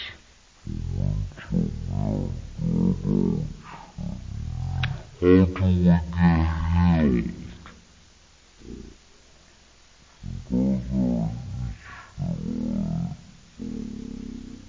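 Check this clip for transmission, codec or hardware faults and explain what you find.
One fault runs through the whole clip: a wrong sample rate. The samples are being clocked out far slower than they were captured, with no rate conversion, which fits audio recorded at 44.1 kHz being played at 16 kHz. Everything slows to about 0.36 times normal speed, and pitch drops with it by about 17.6 semitones, nearly an octave and a half. The result is a sluggish, deep sound.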